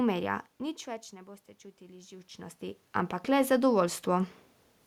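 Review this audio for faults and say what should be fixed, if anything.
Automatic gain rising runs from 1.78 s to 4.36 s. The level reaching the microphone drops by about 18 dB, partly because the talker moves away around 2 s. The gain control reads this as a quiet input. It then slowly adds about 4 dB over those two and a half seconds. The room noise swells along with the voice, so the background creeps up. To prevent it, slow or cap the gain control and keep the talker at a steady distance.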